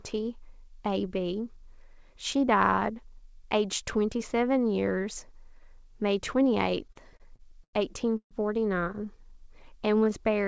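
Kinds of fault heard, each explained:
Repeated stalls (stutter): between 6.88 and 7.76 s the jitter buffer ran dry seven times, and the receiver stretched the last sound to fill 213 ms, the longest gap 95 ms, so the speech drags without losing anything.
Call audio freeze: at 8.17 to 8.34 s the speech halts for 134 ms, with the last 90 ms silent, then resumes intact; likely delayed packets emptying the jitter buffer.
Jitter buffer slow-down: from 9.05 to 10.23 s repeated pitch periods add 103 ms, so the speech plays at 92% speed with unchanged pitch and drawn-out sounds.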